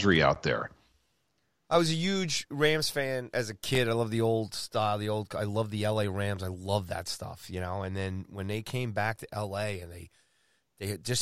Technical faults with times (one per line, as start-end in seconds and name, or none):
0.75-4.75 periodic USB or driver dropouts